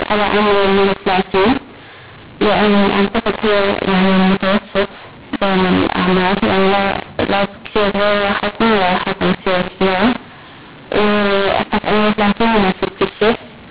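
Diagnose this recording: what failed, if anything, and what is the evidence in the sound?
The failure sits at the codec stage, in the G.711 decode, where mu-law and A-law are mixed up: mu-law samples are decoded as A-law across the whole clip. The wrong expansion curve scrambles levels, so the speech sounds harsh and distorted throughout, and pauses fill with noise instead of silence. The 4 kHz telephone band itself comes through as expected.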